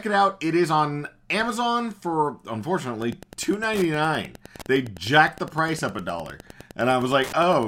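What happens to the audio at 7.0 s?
A steady ticking about ten times a second, roughly 20 dB below the speech, runs from 2.93 s to the end: Wi-Fi interference, a nearby radio's 102.4 ms beacon rectified by the audio circuit.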